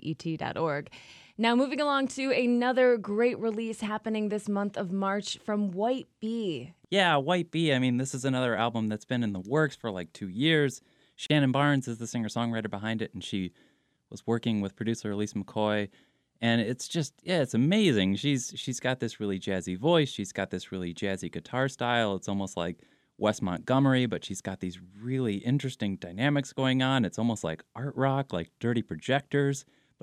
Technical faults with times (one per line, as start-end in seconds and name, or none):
11.26-11.30 gap at a join of encoded pieces